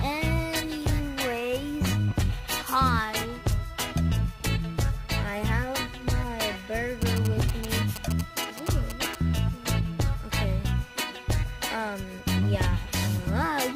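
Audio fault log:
7.02–9.15 s: GSM signalling bursts, a galloping dit-dit-dit of short buzzes near 217 Hz, roughly 10 dB under the audio, from a nearby phone's radio pulses getting rectified.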